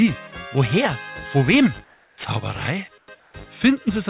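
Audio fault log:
1.84–2.18 s, 2.98–3.08 s and 3.20–3.34 s, comfort noise in place of the background: real background becomes flat, featureless hiss, about 3 to 6 dB quieter, likely from the receiver filling transmission pauses with synthetic noise.
3.06 s, onset clipped by the voice detector: the sound starts abruptly without its first 20 ms, likely because the sender's detector reacted late and filler noise covered the gap.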